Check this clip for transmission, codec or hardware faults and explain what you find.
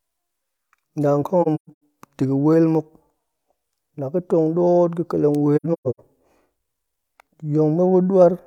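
The clip has AAC frame loss with muting, twice: from 1.42 to 1.80 s and from 5.56 to 6.00 s. Frames went missing and the decoder zeroed their spectrum. Overlapping windows fade each gap, leaving soft-edged holes. About 300 ms of speech vanishes in scattered dropouts across roughly 430 ms, consistent with several lost frames, with the longest silence around 150 ms.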